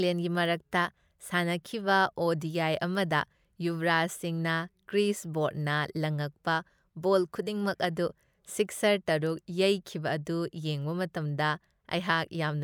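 No technical faults can be heard anywhere in this recording.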